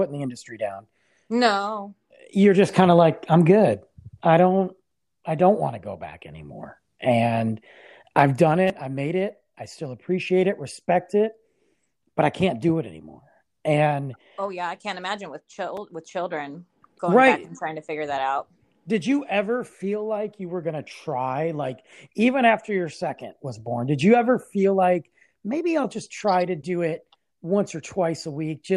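Two brief buzzy clicks in speech, at 8.68–8.70 s and 15.77 s, are repeated buffer faults: a 5.33 ms chunk replayed when audio arrived late, fitting a 256-sample buffer.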